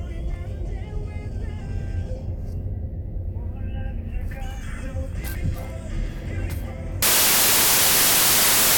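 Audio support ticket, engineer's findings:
Samples built from the wrong bytes, 7.02 s to 8.78 s: sudden loud harsh broadband noise, sample reader misassembling bytes.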